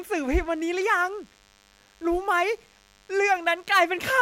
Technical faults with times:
0.00-4.22 DECT cordless phone buzz

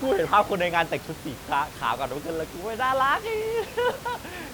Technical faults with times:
none

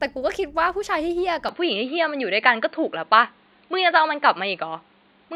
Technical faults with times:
1.49-5.36 input switched to a poorer device

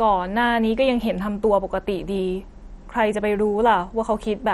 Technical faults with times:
0.00-4.53 MP2 compression

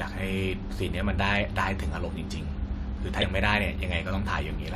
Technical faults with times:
3.22 compressed frames skipped

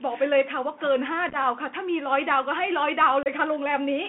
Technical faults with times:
0.00-4.08 Bluetooth CVSD headset codec
1.29-1.35 unconcealed Bluetooth headset packet loss
3.23-3.27 unconcealed Bluetooth headset packet loss

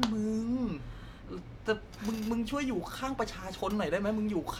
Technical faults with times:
none

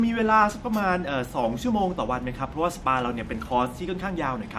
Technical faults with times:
none

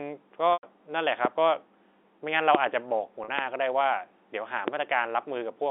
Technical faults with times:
0.53-0.63 packet loss with pitch repetition
1.25-1.27 loud pop
2.55-2.57 loud pop
3.24-3.28 packet loss with pitch repetition
3.39-3.41 loud pop
4.68-4.70 loud pop

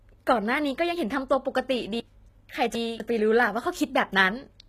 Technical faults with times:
0.00-4.68 HE-AAC compression
2.00-3.00 chunks out of order

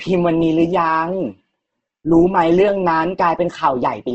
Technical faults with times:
0.00-4.14 Opus compression

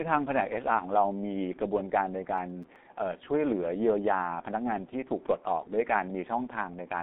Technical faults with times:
0.00-7.02 G.723.1 codec
2.38-2.76 processor overload crackle

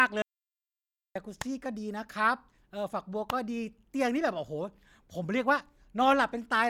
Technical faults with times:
0.22-1.15 audio dropout to silence

